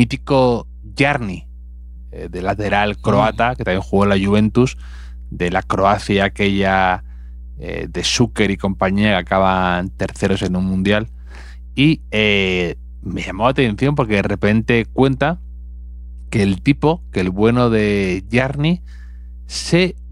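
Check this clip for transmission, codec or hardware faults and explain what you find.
There is one hardware fault, present from start to finish. Mains hum sits at 60 Hz, fairly prominent under the speech, likely from a ground loop or nearby transformer coupling the power line into the signal path.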